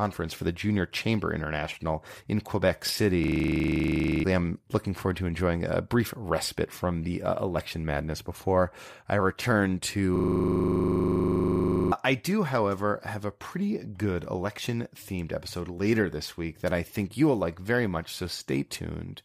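Speech with two system hang loops, from 3.24 to 4.24 s before "I'm looking forward to" and from 10.16 to 11.92 s after "madness before I return". A 40 ms fragment repeats as a 25 Hz buzz while the system is frozen, and about one and two seconds of speech are lost.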